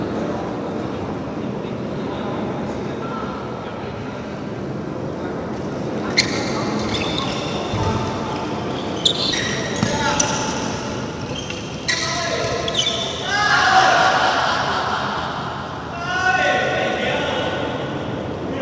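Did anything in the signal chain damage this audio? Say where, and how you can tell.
Yes. At 9.32 s there is a skip ahead at the jitter buffer stage. About a second of audio is simply missing. Playback jumps forward with no silence and no fill. The two sides of the cut are butted together directly. Delayed packets probably arrived in a burst, the buffer overflowed, and the receiver discarded the oldest audio to catch up. The audio runs through a G.722 call path that stops at 8 kHz, and the splice sits inside that band.

From 9.41 s to 11.70 s comes a jitter buffer speed-up, also at the buffer stage. The audio plays at about 113% of normal speed. Its pitch does not change. It sounds hurried. The receiver still held more audio than it wanted, so it cut out many short pitch-period pieces in a row. Those removals add up to roughly a third of a second.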